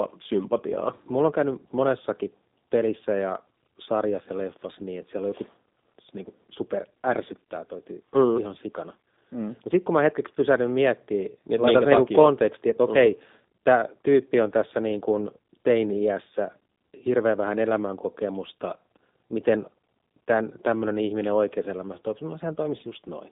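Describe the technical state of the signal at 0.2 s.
At 0.2 s, as throughout, G.729 codec damage is plain: 8 kbit/s pulse-and-filter resynthesis gives a rough, synthetic edge, not just telephone-band dullness, with nothing above 3.8 kHz.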